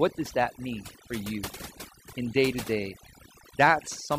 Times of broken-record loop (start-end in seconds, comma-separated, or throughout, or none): none